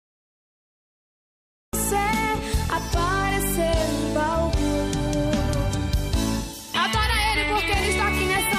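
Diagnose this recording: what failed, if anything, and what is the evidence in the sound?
Cut-off start, at the driver or buffer stage. Digital silence runs to 1.73 s. Sound then enters mid-event with no attack, because capture began late.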